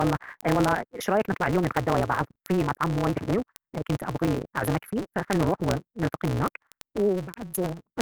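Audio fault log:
Throughout, block size mismatch (truncated): there's a steady buzz at 188 Hz running under the speech, and everything moves along 1.88 times too fast while the pitch stays about where it should be. One stage is handing over longer blocks than the next one reads, so the tail of each block gets discarded. The buzz comes from those regular chops, and the speed-up from the missing audio. The block rate points to a 256-sample read.
0.12 to 8.01 s, word clock ticks: sharp ticks keep coming at a steady pace, roughly one every twentieth of a second, around a hundred and fifty over the run. That pattern suggests a digital link read by a device on its own free-running clock, off by a few hundred parts per million from the sender. Each time the two clocks slip past each other, a single sample gets dropped or doubled, and that small discontinuity is the tick you hear.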